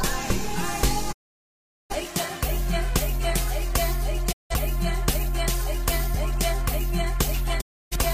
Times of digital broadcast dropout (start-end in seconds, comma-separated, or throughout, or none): 1.11-1.95, 4.31-4.54, 7.60-7.96